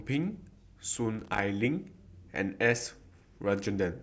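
A worn or dirty contact making and breaking chops the speech signal from 1.19 to 1.40 s, a loose connector crackle heard as irregular scratchy popping.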